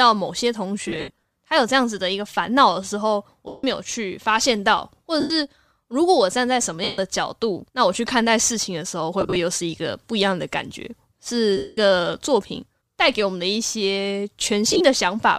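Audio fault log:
0.88–1.22, 3.48–3.64, 5.20–5.30, 6.84–6.98, 9.21–9.36, 11.57–11.77, 14.67–14.81 s: lost LE Audio frames. Each dropout of 97.5 to 217.5 ms is concealed by replaying the previous spectrum with scrambled phase, so the speech smears into a brief noisy hiss instead of clean silence. The first, fifth and last bursts are broken into short runs, the longest around 70 ms.
throughout: Bluetooth LC3 compression. The slight grain in the speech likely comes from the Bluetooth LC3 compression at 64 kbps.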